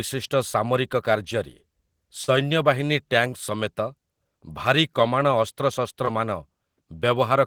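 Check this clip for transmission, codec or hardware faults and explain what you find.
Three short concealed packet losses occur in this speech, at 2.23 to 2.33 s, 3.30 to 3.34 s and 6.05 to 6.09 s. Each is a brief smear or wobble where roughly 40, 20 and 20 ms of audio never arrived. The receiver bridged each gap by extending the preceding sound, then blended back into the real signal.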